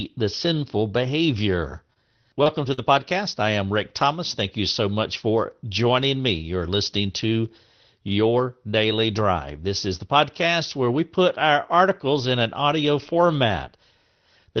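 Short concealed packet loss hits this speech recording at 1.93 to 1.97 s, 2.43 to 2.48 s and 2.74 to 2.79 s, the last about 40 ms and the others about 20 ms each. In each case a stretch of the call arrived too late for the decoder, so the receiver extended the preceding sound, following its pitch where voiced or as shaped noise where not, and then faded back into the real signal, leaving a brief smear or wobble. A lost packet rebuilt from error correction appears at 2.37 to 2.39 s, and again at 2.46 to 2.48 s and 2.77 to 2.79 s, where it closes out the last two concealed gaps. Each time a 20 ms packet went missing, but the following packet carried a low-bitrate Opus in-band copy of it, so the decoder played that rougher, noisier version instead of leaving a hole. The whole recording carries the coding noise of an Opus call path, with content above roughly 6 kHz absent, which fits a setting around 20 kbps.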